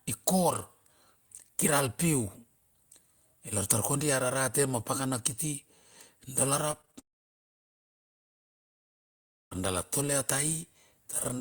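From 6.71 to 6.95 s, repeated packet loss (robotic sound): four short gaps, the longest 23 ms, are patched by extending prior audio, leaving a third of the stretch choppy.

From 6.99 to 9.53 s, the sound drops to near silence for about 2.5 s, then resumes with that portion missing, likely a long network dropout.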